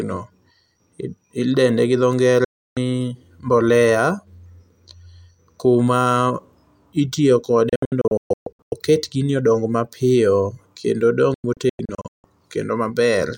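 Digital broadcast dropouts strike three times in this speech clip. At 2.44 s the sound snaps to silence within about 3 ms and stays gone for 0.32 s. From 7.69 s to 8.72 s it breaks into several short holes totalling 0.64 s, the longest 0.13 s, and from 11.34 s to 12.24 s it does the same, totalling 0.48 s with a longest gap of 0.16 s. Each time the receiver lost or rejected frames and muted until clean ones arrived, so the missing stretches are simply gone.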